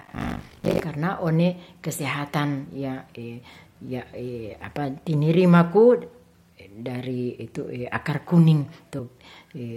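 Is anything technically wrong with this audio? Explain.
Yes, two things stand out in this speech clip.

From 0 to 0.8 s there's buffer tearing: the writer and the hardware reader have drifted, so something under half of each buffer replays audio from around 70 ms earlier. That gives a steady robotic 50 Hz buzz, pointing to roughly 20 ms buffers.

At 8.98 s there are compressed frames skipped: about five frames of 21.3 ms each go missing, jumping roughly 100 ms ahead. You hear the speech jump forward at that point.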